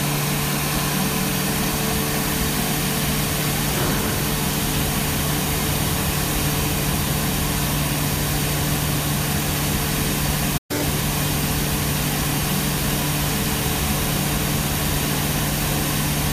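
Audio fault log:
10.57–10.71 s, playback stall: The sound cuts to silence mid-flow for about 120 ms. The player likely ran short of data, then resumed where it stopped.
10.71–10.83 s, catch-up at higher speed: The backlog plays at double speed. Pitch jumps roughly ten semitones, then returns to normal after all of the lost time is regained.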